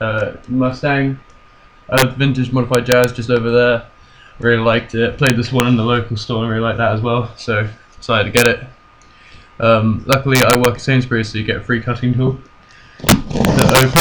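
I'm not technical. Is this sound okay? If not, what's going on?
No. Integer overflow makes violent cracks at 1.98–2.02, 2.75–3.04, 5.27–5.6, 8.37–8.46, 10.13–10.65 and from 13.09 s to the end. Loud peaks pass the largest number the system can hold and wrap to the opposite extreme instead of stopping there. That is why each crack is harsher and more abrupt than clipping's flattened buzz.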